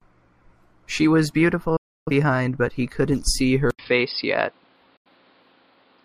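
At 1.76 s the speech cuts out in a digital broadcast dropout. It fades to silence within about 8 ms and stays silent for about 0.3 s, until 2.11 s. The receiver muted while frames were lost. That stretch of speech is gone.

At 3.71 s the speech goes quiet for 80 ms, then returns duller and boxier until the end. Nothing reaches above 5.1 kHz, and a faint new noise floor sits far below the speech. The loudness stays about the same. This is likely an input switched to a poorer device.

From 4.96 to 5.09 s there is a second, shorter dropout. The speech again fades out within about 8 ms and is missing for about 85 ms.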